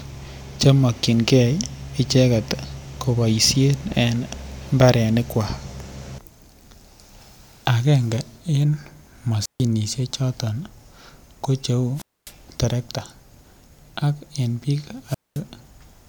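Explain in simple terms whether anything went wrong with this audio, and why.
Three times the speech cuts out briefly: from 9.40 to 9.64 s, from 11.95 to 12.33 s, and from 15.07 to 15.41 s. Each is a wireless microphone squelch dropout. The radio link weakens, a short burst of hiss rises, and the receiver mutes itself, leaving roughly a 0.14, 0.25 and 0.22 s hole before the voice returns. That rising hiss before the mute sets it apart from a digital dropout, which goes abruptly silent without static.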